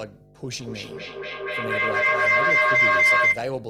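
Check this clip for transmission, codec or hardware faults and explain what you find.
Two faults are present in this speech clip: a continuous mains hum and a feedback howl that covers most of its length.

Mains hum runs from start to finish as a steady low tone at 50 Hz, sitting roughly 10 dB below the speech. A ground loop or a nearby transformer is coupling the power-line frequency into the signal path, so the tone stays fixed in pitch and level regardless of what the speaker does.

Feedback howl begins at 0.39 s and continues until 3.55 s. It is a piercing tone around 2 kHz that swells to about 13 dB above the speech at its loudest, pulsing roughly every 200 ms. Two devices in the same room are connected to the same call, so sound leaving one loudspeaker reaches the other microphone and returns amplified on each pass. The repeats grow rather than decay, narrowing to the band the loop favours, and the pulse rate reflects the loop's round-trip delay.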